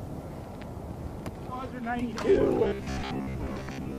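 From 2.64 s to the end at 3.99 s, the sound turns into robotic sound from repeated short buffers: a rigid, metallic buzz near 66.7 Hz. The likely cause is audio arriving too seldom, so roughly half the time is filled by replaying the last 15 ms while real audio is skipped. A spectrogram shows evenly spaced harmonic lines at multiples of 66.7 Hz, and the waveform shows identical 15 ms segments repeating.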